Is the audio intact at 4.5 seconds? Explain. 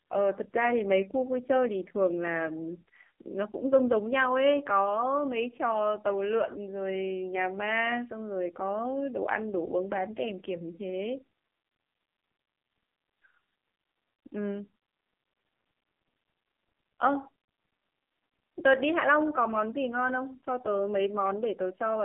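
No. At 4.5 seconds the speech carries the AMR narrowband mobile codec damage present through the whole clip. The vocal-tract model, driven by sparse pulses in 20 ms frames, rebuilds the voice as a heavily buzzy, synthetic sound, which suggests a very low bitrate near 5.9 kbps. On a spectrogram, energy sits in a 200 Hz to 3.5 kHz band, with an empty band above and smeared harmonics. The waveform looks thin, with little low-end body.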